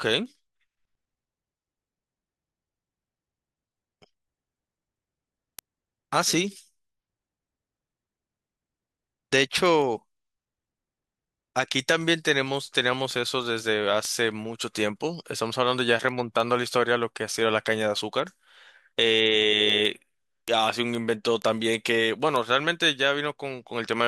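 Word clock ticks run from 0.10 s to 23.93 s, about 150 sharp clicks of uneven strength spaced roughly every 0.15 s across the speech. The receiving device is reading a digital link on its own clock rather than locking to the sender's. Each time the two clocks drift a full sample apart, a single sample is dropped or repeated and the neighbouring samples are misread. This produces a steady tick rate that points to a clock mismatch of around 150 ppm.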